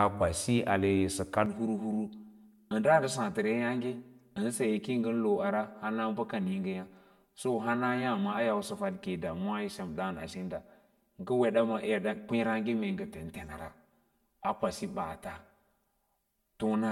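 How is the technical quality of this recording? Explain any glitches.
The recording has one clear fault. From 1.46 s, right after "kwasi ale sə kad", to the end, the speech turns hollow and phasey. That is channel delay (comb filtering): one channel lags around 5 ms, so the mono sum cancels at regularly spaced notches starting near 100 Hz.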